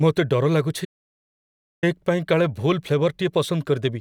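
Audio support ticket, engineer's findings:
Audio dropout to silence, 0.85 to 1.83 s: input likely lost via disconnect or mute while recording continued, writing silence. Speech cuts mid-flow; roughly 0.98 s of pure silence, no room tone.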